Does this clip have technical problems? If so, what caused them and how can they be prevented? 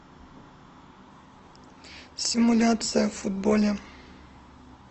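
Yes. From 1.10 s to the end, the speech quality suddenly drops, with more codec artefacts, as an adaptive stream drops to a lower bitrate, consistent with a step from about 64 to 16 kbit/s Opus after the connection slowed. Unlike packet loss, there is no gap or dropout, only an abrupt, sustained quality change. A steadier connection or a higher minimum bitrate setting would prevent it.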